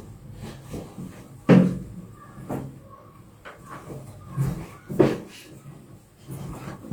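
No technical faults detected.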